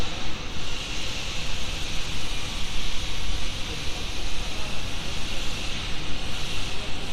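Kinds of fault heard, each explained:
No technical fault can be heard anywhere in this recording. The everyday sounds come through steadily, with nothing breaking in on them at any point.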